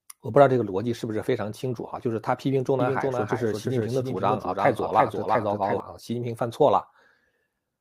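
A speech recording in which, from 2.80 s to 5.80 s, every syllable is followed by a clean second copy trailing roughly 300 ms behind and a few decibels quieter, with no reverberant tail or room colouring; it cuts in and out abruptly at both ends. This is a doubled audio track, likely caused by the same signal being picked up again through a slower route, or by an edit that left two copies overlapping out of step.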